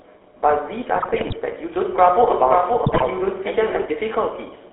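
Throughout, the speech carries the buzzy, gravelly texture of the GSM full-rate codec. The vocal tract is modelled and driven by sparse, regular pulses, so harmonics turn coarse. The band sits roughly between 300 Hz and 3.4 kHz, which fits the 13 kbps full-rate coder rather than a newer, smoother one.

From 0.96 to 1.37 s, GSM bit errors break the voice into squawks, pops and gargling. Corrupted filter, pitch and gain values make whole frames lurch in tone and level. Unlike packet loss, the audio never goes silent; it turns garbled.

From 2.30 to 3.86 s a doubled audio track appears: a full-band copy trails about half a second behind, a few dB quieter. It starts and stops abruptly and has no decay or room colour, which sets it apart from a reverb tail or acoustic echo. It is likely a second capture through a slower path.

Within that stretch, from 2.86 to 3.09 s, further GSM bit errors produce gargling and level bursts, caused by a higher error rate than the first burst.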